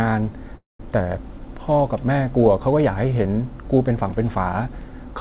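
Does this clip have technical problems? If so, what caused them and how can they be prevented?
Yes. A call audio freeze runs from 0.56 to 0.81 s. The speech trails off into a fading buzz or hiss, then goes almost silent for about 0.17 s before resuming exactly where it stopped. This likely means delayed packets emptied the jitter buffer. An adaptive jitter buffer with more headroom, and a steadier network path, would prevent it.

A dropped buffer (overrun) occurs at 3.25 s and again at 4.81 s. Each is a jump where the speech skips ahead by around 30 ms with no gap. The likely cause is that the capture program read the samples too late, after the hardware had overwritten them. Larger capture buffers and a higher-priority audio thread would prevent these skips.

The band limit at 4 kHz comes from the G.711 call codec and is expected behaviour for that path, not a fault.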